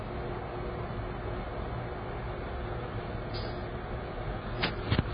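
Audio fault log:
throughout: AAC compression. Dull and smeared with a fizzy, warbling texture and nothing above 5 kHz, likely from heavy AAC-LC coding at a very low bitrate around 16 kbps.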